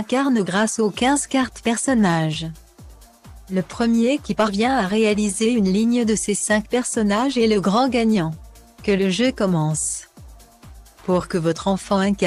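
No faults are audible anywhere in the clip.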